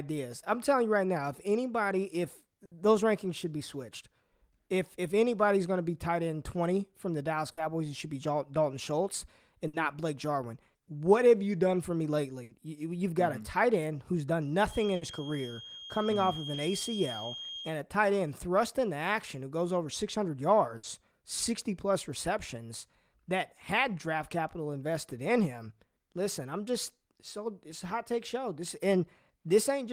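Speech, affected by two faults. A burst of packet loss occurs six times, at 2.65, 7.51, 9.67, 12.43, 14.95 and 20.77 s. Each time about 60 ms of audio never arrived, so the receiver extended the last sound for about 60 ms, fading it as a brief buzz or hiss, before jumping ahead past the lost section. From 14.65 to 17.78 s, a feedback whistle holds at 3.2 kHz, likely a speaker-to-microphone loop sitting just at the edge of feedback. It is heard as a thin tone that slowly swells and fades, well below the speech.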